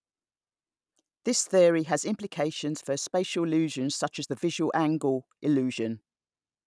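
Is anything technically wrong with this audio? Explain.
No, nothing technically wrong is audible in this speech clip.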